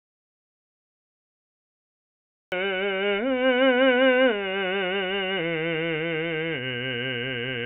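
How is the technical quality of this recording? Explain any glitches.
The recording opens in dead silence, and the music is band-limited throughout, with nothing above 4 kHz, as expected from a G.711 A-law call path.

Audio dropout to silence, 0.0 to 2.52 s: the clip begins already in a gap of silence, without even room tone, before the music cuts in at 2.52 s. The likely cause is a lost input, such as a disconnected device, a broken link or a stray mute, while the recorder kept writing silence, so whatever played then is gone.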